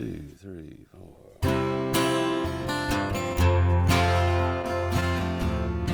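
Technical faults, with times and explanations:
3.33 to 5.04 s, scattered short gaps: across this stretch about seven tiny dropouts are dotted around, the longest near 10 ms, adding up to roughly a tenth of a second. The receiver papered over each hole by carrying the previous sound forward, so you don't hear silence. You hear brief ticks, small smears and little hiccups, with about 5% of the span patched and the passage running around 11 ms longer.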